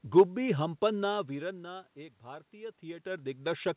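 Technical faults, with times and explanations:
No technical faults are present, so there are no times or explanations to give.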